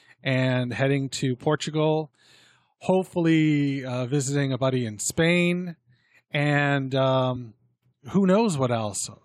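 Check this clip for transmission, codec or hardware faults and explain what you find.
There is one fault in this speech clip: compressed frames skipped at 7.35 s. About three whole frames of the encoded audio never reach the output, either because they are missing from the stream or because the decoder rejected them as corrupt. With a frame length of 23.2 ms, playback jumps forward by around 70 ms of speech.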